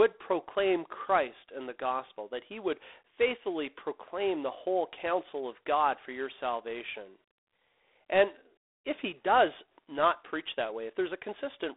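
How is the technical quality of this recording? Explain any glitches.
The quality is limited throughout by narrowband telephone coding, with audible codec noise over the whole clip.

G.726 ADPCM runs throughout. Each sample is sent as a few bits of difference from a prediction, and steps this coarse, fitting 24 kbit/s, add a rasping hiss that tracks the speech level. A spectrogram shows energy between 300 Hz and 3.6 kHz, blank above 3.9 kHz.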